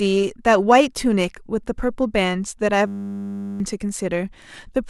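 From 2.87 to 3.6 s the speech gives way to a steady buzz at 100 Hz, with no movement in pitch or level. This is a system hang loop: the computer or its audio driver stalled while the sound hardware kept replaying the same 10 ms slice of its ring buffer, dozens of times in a row. Roughly 0.7 s of real audio never arrives, and the speech simply resumes after the buzz.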